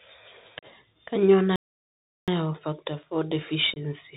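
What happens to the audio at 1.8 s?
A playback stall covers 1.8 s: the speech cuts off abruptly at 1.56 s and the output stays silent until 2.28 s, a gap of about 0.72 s, before the speech resumes. A break this long, with no fade and no noise, most likely means the player ran short of data or its audio thread was held up, so nothing reached the output until it caught up.

The same stretch also carries the Bluetooth CVSD headset codec, which is audible for the whole clip. The encoder sends one bit per sample, saying only whether the waveform should rise or fall, and adjusts its step size as it goes. This narrowband scheme, consistent with a 64 kbit/s headset link, passes nothing above 4 kHz, so the speech sounds muffled. Fast, loud movements outpace the step size and distort, the s sounds turn scratchy, and a grainy hiss lies under the speech on both sides of the gap.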